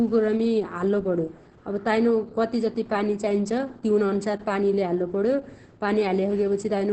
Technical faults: Opus voice compression

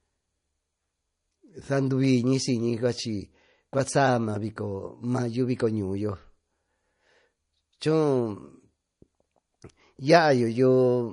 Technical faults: MP3 compression

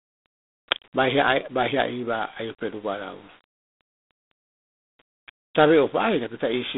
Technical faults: G.726 ADPCM

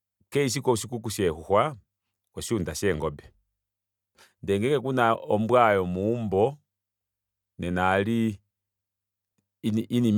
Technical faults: none

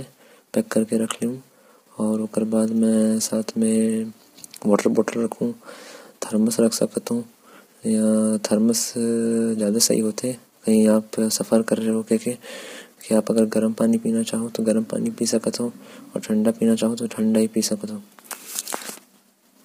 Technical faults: low-delay AAC compression

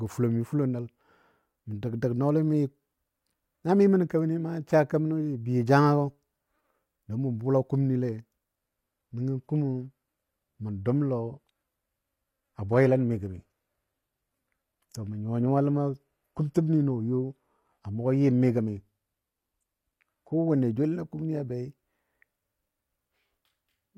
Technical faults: adaptive stream at a lower bitrate

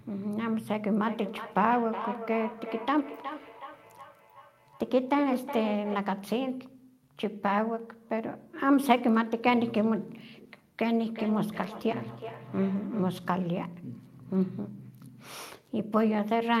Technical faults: feedback echo between two devices

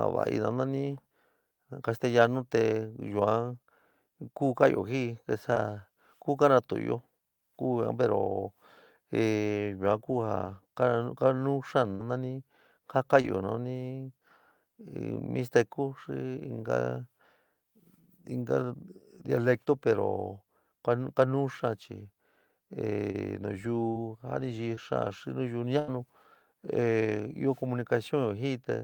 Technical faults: short concealed packet loss; burst of packet loss

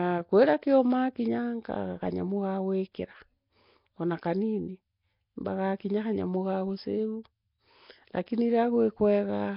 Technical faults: Nellymoser compression

